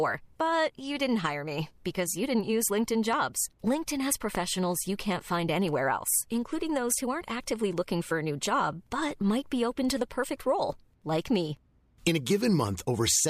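At 3.13–3.15 s and 4.35–4.37 s a loud pop cracks over the speech, about 10 dB then about 15 dB above it. Each is likely a stray voltage spike. The waveform shows a tall, narrow spike, and the spectrogram shows a thin, full-height vertical stripe.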